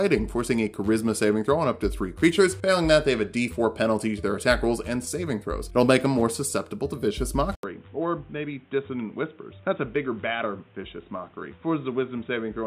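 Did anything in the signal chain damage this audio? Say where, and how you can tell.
Yes, at the input device: from 7.55 s, after an 80 ms gap, nothing above 3.8 kHz, a slightly lower level and new background noise. Likely the input switched to a poorer device.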